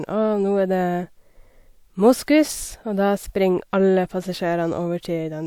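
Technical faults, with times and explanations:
No technical faults detected.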